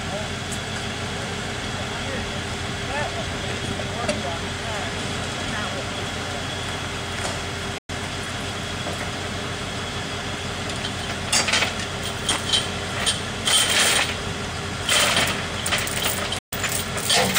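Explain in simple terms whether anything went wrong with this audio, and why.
Two brief silences cut in, at 7.78–7.90 s and 16.38–16.53 s, then the sound picks up further along. That's likely a Bluetooth dropout, where late packets were thrown away.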